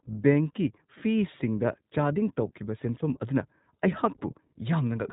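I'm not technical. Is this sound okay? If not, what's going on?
No. The iLBC codec affects the whole clip, start to finish. This internet-calling codec keeps only the narrow telephone band, so nothing above about 3.8 kHz survives, and the speech sounds muffled and boxy. It also rebuilds the sound in short independent chunks, which fits 20 ms frames, and that leaves the speech plainly rough and slightly synthetic, like a low-quality phone call.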